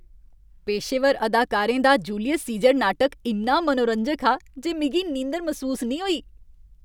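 At 2.64 s the speech carries a single sharp click, the mark of dropped samples: the stream most likely lost a tiny run of samples, a fraction of a millisecond's worth, so the waveform leaps straight from one value to a later one. Far too little audio is missing to remove any sound. On a waveform it shows as an abrupt step; on a spectrogram, as a thin vertical line running across all frequencies.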